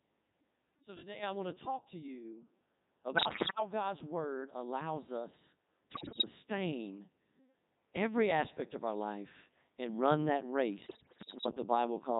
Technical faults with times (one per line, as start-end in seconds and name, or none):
0.00-12.20 Codec 2 vocoder
3.16-3.60 bit errors on digital voice radio
5.92-6.25 bit errors on digital voice radio
10.86-11.46 bit errors on digital voice radio